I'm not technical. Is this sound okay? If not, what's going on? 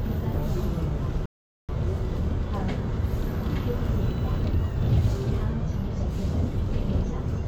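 No, there's a rebuffering stall. At 1.26 s the sound drops to silence for about 0.43 s, then picks up at 1.69 s exactly where it left off. The player simply ran out of downloaded audio and waited for more. Nothing's missing; it just adds a pause.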